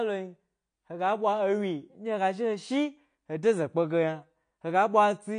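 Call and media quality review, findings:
Dull, band-limited speech throughout. Nothing above 9.8 kHz. Sibilants smeared and fizzy, with a warbling texture on sustained sounds. Codec damage plainly audible. Likely AAC compression, AAC-LC. Lossy coder quantising spectral lines too coarsely for the available bits. High band dropped. Damage level fits a low bitrate, around 32 kbps. Check encoder bitrate setting on the media path.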